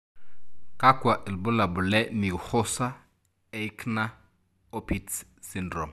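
Nothing technical goes wrong anywhere in this stretch of speech, so there's no fault to flag.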